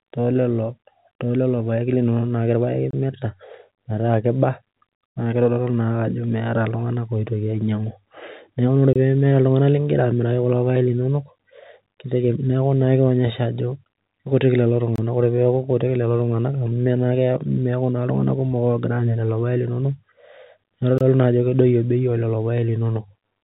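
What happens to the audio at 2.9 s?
A gap between chunks cuts the speech from 2.91 to 2.93 s: about 25 ms of silence inserted at a join between separately delivered blocks of audio. It sounds like a brief hard-edged dropout. A spectrogram shows a clean vertical blank stripe, and the waveform flatlines abruptly.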